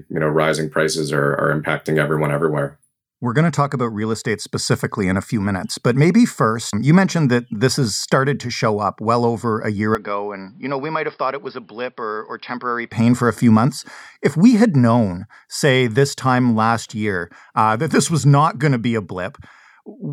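After "well over a year", from 9.95 to 12.92 s the waveform shrinks about 10 dB and the spectrogram empties above 5.4 kHz, likely an input switched to a poorer device.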